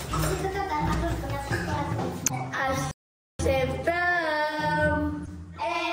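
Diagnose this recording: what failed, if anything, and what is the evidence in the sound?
Corrupt frame decoded, at 2.26 to 2.31 s and again at 5.23 to 5.28 s, is a codec-stage failure. Each is a short burst of misplaced energy, a chirp or blip about 50 ms long. The first spans several frames and is loud, peaking around -10 dBFS. The second covers a couple of frames and is much quieter, near -25 dBFS. Flipped bits corrupted gains or spectral codes, and the decoder still rendered those frames, putting energy at the wrong frequencies.

Playback stall, from 2.91 to 3.39 s, sits at the playback stage. The output cuts out abruptly in mid-flow and stays silent for about 0.48 s before the sound resumes. The likely cause is a player that ran short of data or had its output thread blocked, so it had nothing to render until it recovered.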